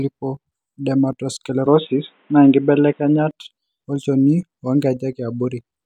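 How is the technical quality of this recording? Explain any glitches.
The recording has one clear glitch. From 1.66 to 3.31 s the input likely switched to a poorer device, a narrower-band microphone path. Everything above 3.8 kHz vanishes, so the speech turns dull and boxy, shifts noticeably in level, and gains a faint new background hiss. It switches back without any gap.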